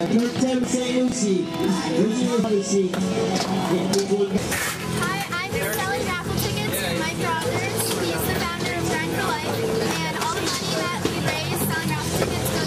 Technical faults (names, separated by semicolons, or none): chunks out of order